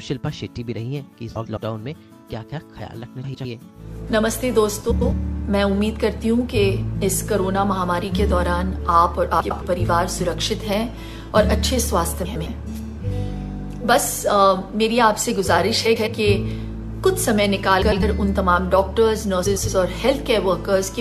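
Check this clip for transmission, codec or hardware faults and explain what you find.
The clip has one kind of fault: frames out of order. It occurs eight times, at 1.35–1.58, 3.24–3.45, 4.91–5.13, 9.40–9.62, 12.25–12.47, 15.85–16.07, 17.81–18.03 and 19.46–19.68 s. Each time, two adjacent blocks of about 105 ms were decoded in swapped order. That fits runs of four frames. The stretch plays back to front by halves. It sounds like a brief garbled flutter. No time is lost.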